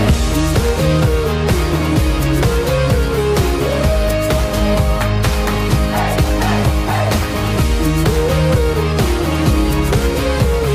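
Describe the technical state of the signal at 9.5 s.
At 9.5 s the signal is intact, with no dropout, distortion, glitch or other technical fault present at that moment.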